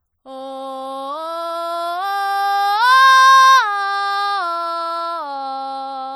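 A starved MP3 encoder is the likely cause, running throughout the music at a rate that fits roughly 48 kbps. Short of bits, it cuts the treble and drops quiet detail frame by frame, leaving a plainly audible watery swirl and smeared attacks.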